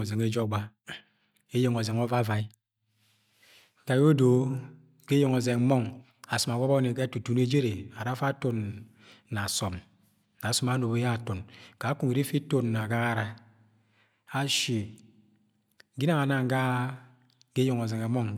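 No technical faults can be heard anywhere in the recording, which keeps its signal steady and intact throughout.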